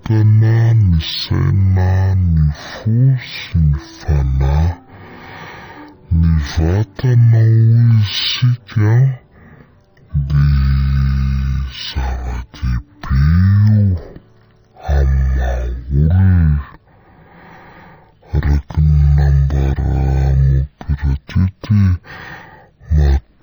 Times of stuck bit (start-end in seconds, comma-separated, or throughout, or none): none